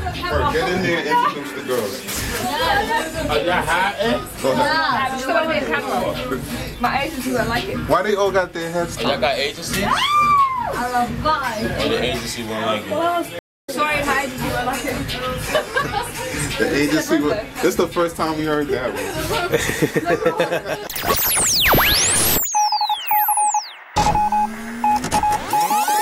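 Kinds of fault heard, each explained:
Stream reconnect: at 13.39 to 13.69 s the connection drops, 250 ms of silence follows, then a fresh decoder resumes the audio roughly 150 ms further on.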